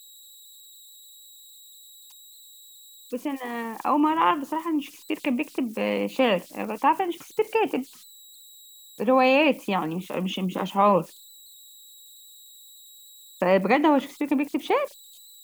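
Throughout the speech, converter idle tones sit about 27 dB below the signal: an undithered delta-sigma converter cycles through repeating bit patterns at low levels, producing a tone around 4 kHz in pauses and grain under quiet passages, visible as a thin horizontal spectrogram line.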